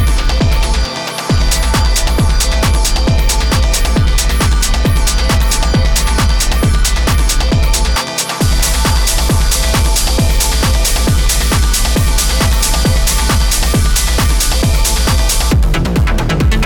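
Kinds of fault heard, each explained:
No faults turn up here, just the sound as it was captured without anything getting in the way.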